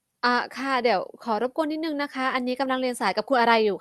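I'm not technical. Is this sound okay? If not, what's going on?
Yes, no faults to hear.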